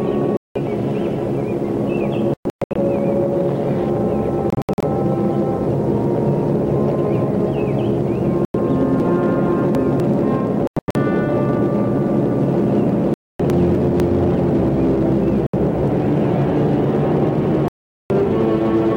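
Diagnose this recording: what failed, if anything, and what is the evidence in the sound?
Gaps at 0.37, 2.34 to 2.76, 4.50 to 4.83, 8.45, 10.67 to 10.95, 13.14, 15.47 and 17.68 to 18.10 s, lasting 70 to 420 ms, are likely a Bluetooth dropout on the playback link. Packets arrived too late and were discarded, so the output went silent. On a waveform each gap is a flat hole. The spectrogram shows blank vertical bands, fragmented within the 2.34, 4.50 and 10.67 s spans. Sound resumes as though it had kept playing.

Chunks out of order appear at the buffer stage, between 9.0 and 10.0 s and between 13.5 and 14.0 s. A 250 ms block plays three chunks late in the first span and one chunk late in the second, so the sound jumbles. The waveform and spectrogram show hard vertical discontinuities at three joins in each span.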